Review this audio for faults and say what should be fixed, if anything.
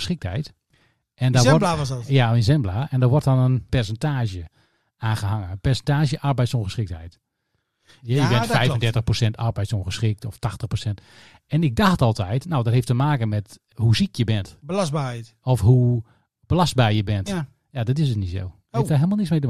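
Nothing stood out on listening to this speech recording, so there is nothing here that needs fixing.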